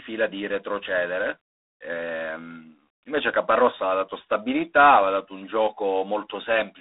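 From the first moment the speech runs through G.726 ADPCM, and the grit suggests the 24 kbit/s mode, three bits a sample. The codec only sends each sample's difference from a running prediction, so with that few bits the quantization error turns into a rasping hiss that swells and fades with the speech level. The line band sits around 300 Hz to 3.7 kHz, and nothing gets through above 3.8 kHz, which gives that boxed-in phone sound.

Right at 6.58 s there's a brief hard clipping event. A peak came in about 1 dB hotter than the stage could carry, so its top was sheared off flat. That squared-off edge throws harmonics well up the spectrum, and with such a small overdrive you hear it as a single quick crackle on that peak rather than any sustained fuzz.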